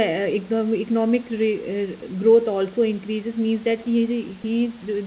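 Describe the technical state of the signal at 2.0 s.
At 2.0 s the speech gives way to a flat hiss for 20 ms, with 10 ms of actual speech lost. The likely cause is sound dropped by the voice detector: the sender treated that moment as background and stopped sending, and the receiver filled in comfort noise.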